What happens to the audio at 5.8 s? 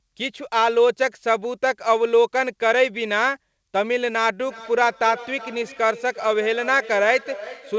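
At 5.8 s the speech is caught in a feedback echo between two devices, which runs from 4.44 s to the end of the clip. Two devices on the same call share a room, so one plays back what the other's microphone sent, and that microphone picks it up again. Each device's echo canceller removes only its own playback, so the sound returns at roughly 0.4 s intervals, thinner and ringing, peaking at about 17 dB below the speech.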